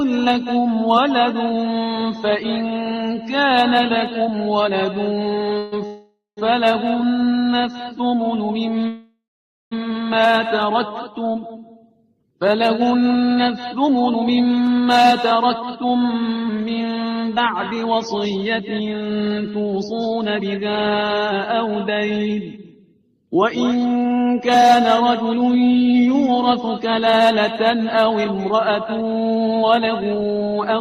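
Call audio freezes occur at 5.58 to 5.74 s, 5.86 to 6.39 s and 8.88 to 9.73 s. The sound stalls into a fading buzz, with the longer ones decaying to silence. The likely cause is delayed packets emptying the jitter buffer. The audio then resumes where it stopped.

A jitter buffer slow-down runs from 7.71 to 8.08 s. Repeated pitch periods add 50 ms, playing at 88 percent speed. The sound drags at unchanged pitch.

Jitter buffer speed-ups follow at 12.45 to 23.15 s (108 percent, about a second removed), 25.17 to 25.99 s and 29.32 to 30.80 s (110 percent). Short pitch-period cuts make the sound hurried, with unchanged pitch.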